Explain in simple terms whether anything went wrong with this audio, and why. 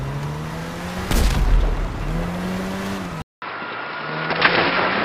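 At 3.22 seconds the recording likely had its input switched to a poorer device, such as a different microphone or a headset. After a gap of about 0.2 seconds, the sound comes back duller and boxier through to the end, because that device captures nothing above 5.3 kHz, so the crisp top end is gone. It is also a little quieter, with a faint new background noise underneath.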